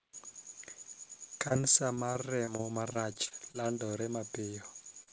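Speech, carried over a WebRTC call path whose band stops at 8 kHz, which fits G.722 at 64 kbps. From 1.48 to 3.56 s the speech turns choppy and robotic, with pieces missing. This is repeated packet loss: about fourteen holes of up to 23 ms each, roughly 0.26 s in total or 13% of the stretch, were each patched by extending the last sound before the next hole arrived. From 3.62 to 4.06 s the speech drags at the same pitch, running at about 90% speed, with vowels drawn out. This is a jitter buffer slow-down: the receiver repeated pitch periods to add 53 ms of reserve delay. From 5.03 to 5.09 s there is a brief smear. This is short concealed packet loss: about 40 ms of audio arrived too late, and the decoder filled 37 ms by continuing the preceding sound before blending back into the real signal.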